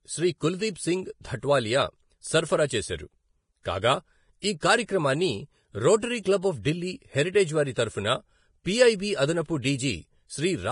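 From start to finish, the speech carries heavy lossy-coding damage, likely Vorbis compression. Nothing survives above 10.6 kHz. The treble turns hissy and grainy, and consonant attacks blur. Detail too fine to encode has become noise. The damage fits a bitrate near 29 kbps.

At 4.60 to 4.62 s there is pre-echo. A brief hiss, about 23 ms long, runs ahead of a sharp attack. The coder spread noise meant for the loud onset across its whole block, so it leaks into the preceding quiet.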